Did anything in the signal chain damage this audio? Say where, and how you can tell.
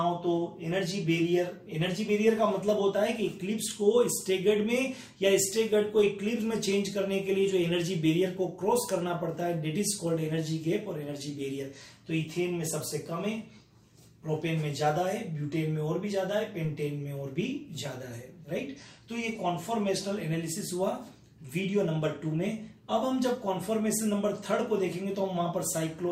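Yes. A DC step at 16.65 s points to the converter or analogue input: the waveform's zero line jumps abruptly, as happens when a converter recalibrates its offset or an input carrying DC is switched in. The step is about -41 dBFS and then drains away as a 5 Hz high-pass lets it decay. It is heard as a single low thump at that moment, while the sound itself carries on unaffected.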